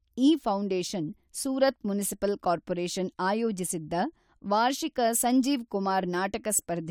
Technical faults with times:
none

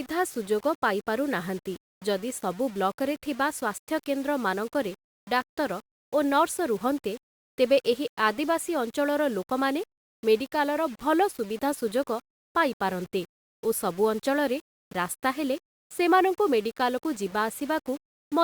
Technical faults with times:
0.00-18.43 low bit depth without dither

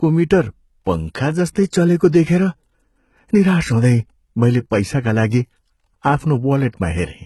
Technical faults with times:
0.00-7.25 HE-AAC compression

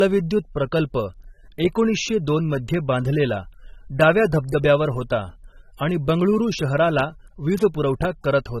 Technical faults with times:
0.00-8.60 low-bitrate audio saved at a high bitrate

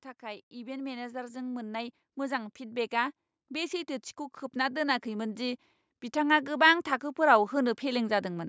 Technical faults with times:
0.20-4.02 automatic gain rising
4.53-8.44 automatic gain rising

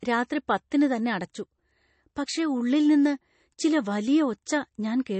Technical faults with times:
0.00-5.20 MP3 compression

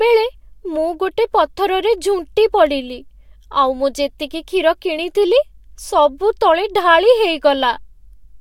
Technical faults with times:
none

